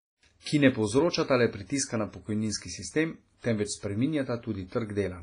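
Heavy WMA compression damage runs through the whole speech clip: the sound rings and smears, with a washy hiss that swells and fades alongside the signal, and nothing survives above 10.5 kHz. This is likely a long-block transform codec starved of bits, which fits a low bitrate around 24 kbps, so quantisation noise spreads in time and weak detail is zeroed.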